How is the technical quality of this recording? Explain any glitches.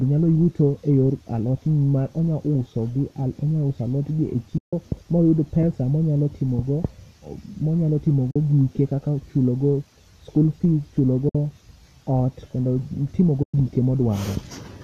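The recording has four brief dropouts where the sound vanishes. Each is AAC frame loss with muting. The holes fall at 4.58 to 4.73 s, 8.31 to 8.36 s, 11.29 to 11.35 s and 13.43 to 13.54 s, lasting 150, 50, 60 and 110 ms. Compressed frames went missing, and the decoder filled them with silence. The overlapping windows fade the sound out and back in, so each gap has soft edges. The gap lengths fit short frames of about 10 ms, likely from low-delay AAC, which leaves only light coding grain.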